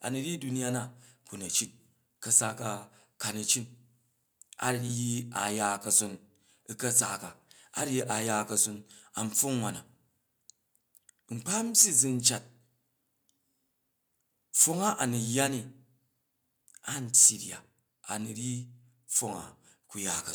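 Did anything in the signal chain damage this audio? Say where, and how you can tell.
Yes. Microphone overload at 2.35–2.38, 5.97–5.99, 6.96–7.00, 11.78–12.28, 14.60–14.64 and 17.16–17.28 s, at the converter stage. Peaks run about 2 to 7 dB past full scale and their tops are flattened, which adds a harsh crackle. The likely cause is excessive input gain.

Microphone volume stepped down at 17.26 s, in the call processing stage. The speech and background fall suddenly by about 2 dB, right within the last distorted peak. This is likely the call software lowering the device's input gain in one step after detecting clipping.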